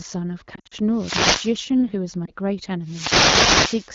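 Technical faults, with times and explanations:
0.55–0.74 s, lost AMR speech frames: About 120 ms of audio drops out, scattered across roughly 160 ms, with the longest gap near 60 ms. The decoder fills each hole by repeating the last good pitch and vocal tract settings at falling gain. In HD Voice that decays quickly, so you hear a choppy warble with quick fades rather than one long smear. The sound comes back a touch thin.
0.92–1.58 s, wireless microphone noise hit: A swish of static rises over the sound. The analogue FM mic's radio signal is fading as reflections cancel each other, so receiver noise climbs.
2.25–2.31 s, lost AMR speech frames: A single lost frame of about 20 ms gives a brief dip or wobble where the concealment bridges the gap. The surrounding AMR-WB coding at 12.65 kbit/s carries only light codec damage.
2.83–3.91 s, wireless microphone noise hit: A longer burst of static, over a second, as the radio link fades again and receiver noise rises.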